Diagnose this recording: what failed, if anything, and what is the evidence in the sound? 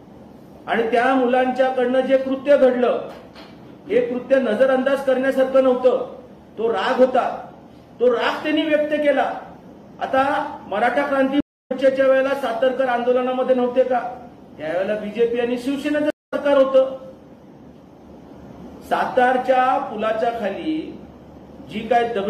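The failure is a stream reconnect, at the network stage. At 11.40 s the audio drops out for about 280 ms, returning at 11.72 s; at 16.10 s it drops for about 200 ms, returning at 16.34 s. Each time the sound resumes at a later point in the material, roughly 150 ms further on, so a little content is skipped. The connection broke, the player fell silent, reconnected and restarted decoding mid-stream at the live position.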